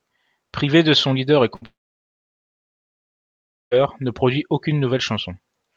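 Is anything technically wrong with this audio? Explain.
Yes. From 1.55 to 1.63 s there is a burst of packet loss: a short run of packets never arrived, so the receiver stretched the last sound for about 60 ms as a fading buzz or hiss, then skipped ahead, dropping that stretch of speech.

Right after, from 1.65 to 3.73 s, comes what is likely a long network dropout. The receiver briefly extends the last sound, then falls to about 2 s of silence before speech resumes further on, with roughly 2.06 s of the original simply gone.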